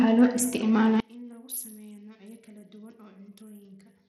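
Throughout, the speech has dull, flickering treble and a gritty, swishy grain, likely Bluetooth SBC compression starving the top sub-bands at a bit pool that fits roughly 80 kbps. From 1.00 s to the end, the speech suddenly drops about 24 dB to a faint residue, the sign of one channel inverted, likely cancelling the centred sound in a mono sum.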